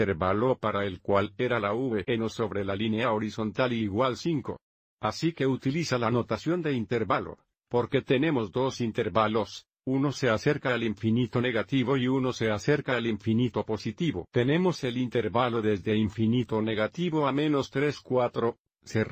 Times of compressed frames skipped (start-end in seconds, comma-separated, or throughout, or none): none